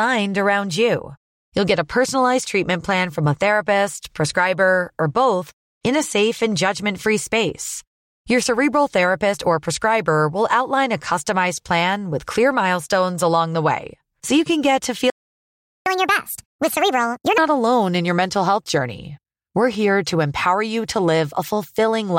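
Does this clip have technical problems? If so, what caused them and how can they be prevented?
Yes. A playback stall cuts the speech at 15.10 s, right after "you can get to". The audio goes silent for about 0.76 s, until 15.86 s, then resumes. The player most likely ran out of buffered data or had its thread blocked. A larger playback buffer and a real-time audio thread prevent this.

Catch-up at higher speed follows at once, from 15.86 s to 17.38 s. The player resamples its backlog at 1.5 times normal speed, so the pitch jumps up about seven semitones. Normal speed returns by "not alone in your". Time-stretching without a pitch change, or a gentler speed-up, prevents this.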